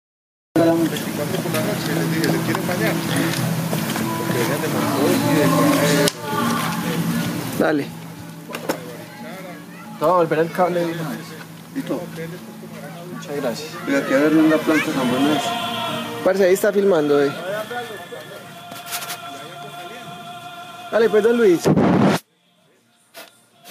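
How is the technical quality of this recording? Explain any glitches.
The recording suffers from gain pumping throughout. The gain swings around 30 dB, and the sound is squashed. Likely cause: input gain set far too high, with a fast limiter squashing each peak.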